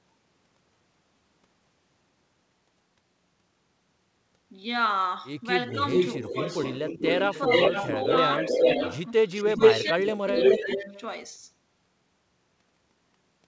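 From 5.71 to 11.01 s there is an echo leak. A delayed copy of the sound trails the original by about 0.42 s. It is strong, roughly as loud as the direct speech or a bit louder. The likely cause is a far-end echo canceller letting its loudspeaker pickup back into the call.

Over the same stretch, speech is suppressed in double talk. The level dips by a few dB from 5.73 to 5.78 s, 7.26 to 8.12 s and 8.51 to 8.62 s. From 9.56 to 10.94 s it drops much deeper, for about a second. The echo canceller likely mistook the talker for echo and turned both down.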